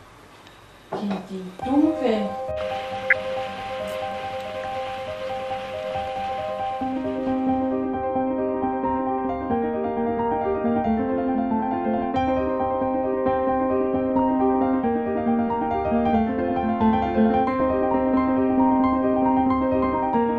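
Dull, gurgly texture sits under the whole clip, and that's most likely MP2 compression. With so few bits, Layer II shuts off the upper sub-bands and coarsely quantises the rest, giving that granular low-rate digital radio sound. The damage is plainly audible and fits something around 80 kbps.

On top of that come three short bursts of DAB burbling, at 3.10–3.13 s, 14.19–14.23 s and 17.60–17.70 s. Bit errors at a rate of a fraction of a percent got past the error correction and scrambled samples and scale factors, so single sub-bands jump briefly and you hear short blips of noise.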